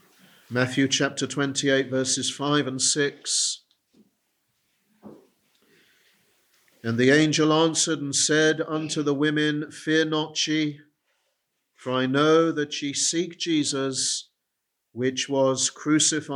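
No technical faults are audible.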